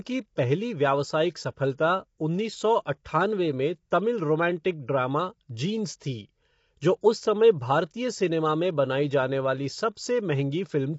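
Throughout the clip the speech has passed through what is likely low-delay AAC compression of the AAC-ELD kind used in video calls. Its short frames resolve the pitch harmonics coarsely, and the plainly audible damage fits a bitrate around 24 kbps. The voice sounds rough and grainy, with noise filling the gaps between harmonics, and nothing reaches above 7.7 kHz, so the top band is missing and the speech sounds dull.

At 3.04 s, between "उन्नीस सौ" and "में तमिल", there is pre-echo. A sharp attack landed late in a transform block, and the quantisation noise sized for that loud onset spread back over the quiet moment before it, about 14 ms earlier. It is heard as a brief hiss just ahead of the attack, which itself sounds softened and smeared instead of crisp.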